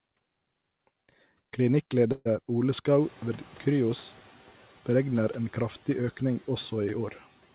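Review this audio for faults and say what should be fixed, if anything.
From 2.12 to 2.27 s the sound stretches into a fading buzz for about 134 ms, then about 20 ms of silence, before resuming exactly where it stopped. This is a call audio freeze, likely from packets arriving late and draining the jitter buffer. Unlike packet loss, nothing is skipped; the audio is delayed by 134 ms. A deeper or more adaptive jitter buffer, or steadier network routing, would prevent it.

Around 3.0 s the room noise jumps by about 20 dB, and from 3.00 to 4.28 s it comes through with little reduction before sinking by about 4 dB over 1.28 s. That is the noise suppressor catching up as its noise estimate adapts. Unlike a steady rise in background noise, the level drifts down while the source stays constant. A faster-tracking noise estimator would shorten this window.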